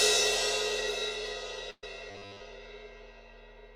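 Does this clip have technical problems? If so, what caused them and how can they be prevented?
Yes. From 1.70 to 1.84 s there is a burst of packet loss. The receiver fills about 120 ms by stretching the last sound and fading it, with about 40 ms of that silent. Audio resumes with roughly 120 ms skipped. A larger jitter buffer and forward error correction would prevent it.

From 2.11 to 2.41 s the sound turns into a rigid, metallic 100 Hz buzz. This is robotic sound from repeated short buffers. The likely cause is a 10 ms buffer being replayed for most of that stretch while real audio is dropped. Larger, steadier audio buffers would prevent it.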